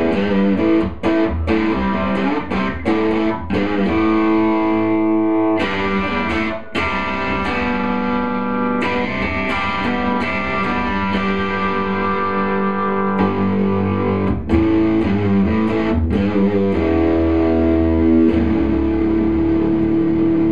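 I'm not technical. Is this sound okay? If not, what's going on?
Yes, this sound is okay. Nothing in it points to a technical problem.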